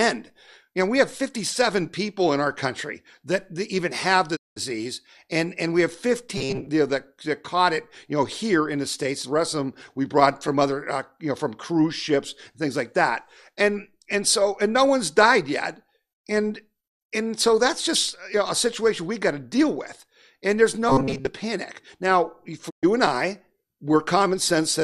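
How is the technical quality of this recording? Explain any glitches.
The recording has two kinds of glitch, each occurring twice.

Digital broadcast dropout at 4.35 to 4.58 s, right after "that that even have", and again at 22.69 to 22.85 s. The receiver stopped getting valid frames and muted until clean data returned. The sound fades out over about 20 ms into a silent hole, roughly 190 ms long the first time and 120 ms the second. Whatever was said in those gaps is gone.

Robotic sound from repeated short buffers at 6.37 to 6.69 s, between "and and we have" and "you know that that", and at 20.89 to 21.29 s, after "deal with and there's". The likely cause is audio arriving too slowly, so playback loops a tiny slice of about 7.5 ms to fill the wait. Most of the audio in these stretches is repeated, which imposes a rigid 134 Hz metallic buzz that loosely tracks the speech.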